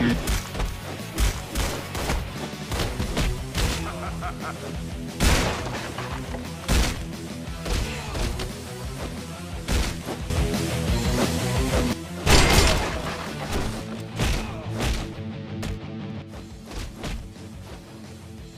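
At 10.3 s the level steps up by about 10 dB in a single instant, with the background noise rising along with the sound, and at 11.93 s it drops back just as abruptly. A second sudden gain jump at 16.22 s cuts the level by about 8 dB, which holds to the end. The likely cause is a digital gain setting applied without any ramp.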